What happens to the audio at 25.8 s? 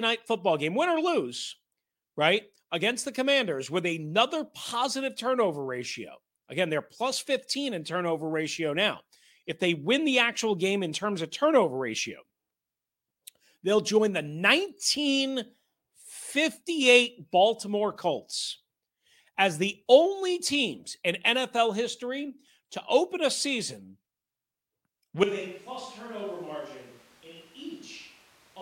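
At 25.8 s you're inside a switch to a distant microphone that kicks in abruptly at 25.24 s and runs right to the end. The speech suddenly turns roomy and hollow, thinner in the low end, drops by roughly 10 dB, and picks up background noise sitting around 20 dB under the speech. The close mic's signal most likely failed or got dropped, leaving a farther-off mic that picks up more of the room.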